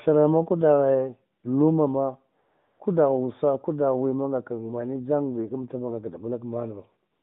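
It's a speech clip carried over a narrowband mobile line, with the band running from about 150 Hz to 3.7 kHz. The light codec texture suggests the higher AMR-NB rate, around 12.2 kbps. The fault is AMR comfort noise. The phone decided nobody was talking, stopped sending speech frames, and the receiver filled the gap with smooth synthetic hiss in place of the real background. You hear it switch in briefly from 1.40 to 1.44 s between "maku daghe" and "luma ma", longer from 2.42 to 2.80 s after "maku daghe luma ma", and again from 7.12 s to the end.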